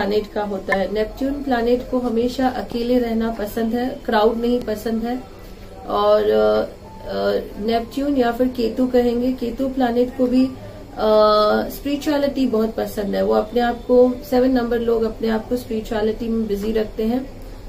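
At 0.72 to 0.74 s there is damaged data in the compressed stream: for about 20 ms the decoder meets corrupted bytes, misreads or discards the affected frames, and loses sync until it finds the next valid frame header. The result is a brief chirp or blip that breaks the flow of the sound. On a spectrogram it appears as a narrow vertical smear of broadband energy, and the waveform shows an abrupt discontinuity.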